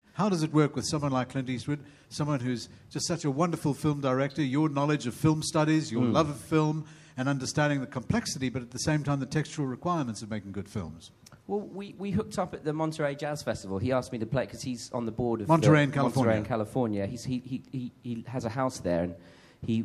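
Nothing goes wrong anywhere in this one; there's simply no technical fault to point to from beginning to end.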